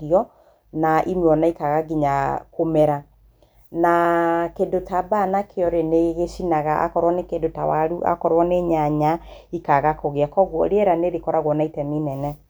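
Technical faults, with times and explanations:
No technical faults can be heard.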